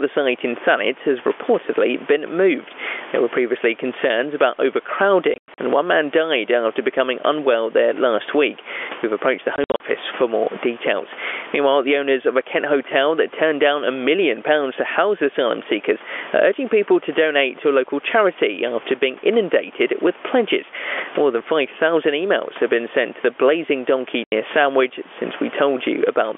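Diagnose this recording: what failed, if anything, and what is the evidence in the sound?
Gain pumping runs through the whole recording, a call-processing or input-gain fault. The gain swings by roughly 15 dB. This is likely an input gain set far too high, with a fast limiter clamping every peak and flattening the dynamics.

Packet loss filled with silence, a network-stage fault, cuts hard-edged holes into the speech. From 5.34 to 5.58 s, 160 ms drops out scattered across 240 ms, with a longest run of 100 ms. From 9.56 to 9.8 s, 140 ms is lost, with a longest run of 60 ms. At 24.24 to 24.32 s there is one 80 ms gap. The gap lengths fit 20 ms packets replaced by silence.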